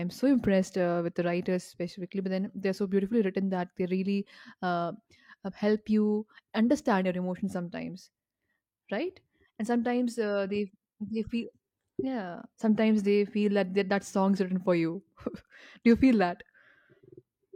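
No technical faults can be heard in the speech at any point.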